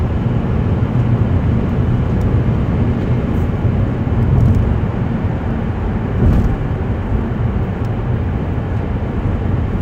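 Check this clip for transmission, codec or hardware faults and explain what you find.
No faults turn up anywhere in the audio: the signal stays continuous and steady, with no disturbance that points to a problem in the chain that carried it.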